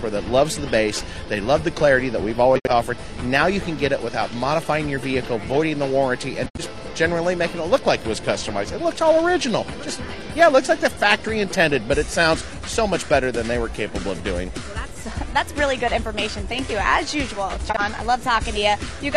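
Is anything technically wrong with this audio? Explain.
Yes, there's corrupt frame concealment at 2.56–2.71 s, 6.46–6.60 s and 17.70–17.80 s: damaged AAC frames were noticed by the decoder and covered by muting or a scrambled repeat.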